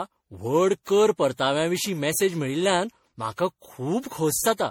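Repeated lossy re-encoding, likely MP3 applied around seven times at a level consistent with 64 kbit/s, affects the entire speech. This generation loss stacks quantisation noise and spectral holes each pass, so it sounds swirly, hollow and smeared, with blurred attacks and nothing above 18.8 kHz.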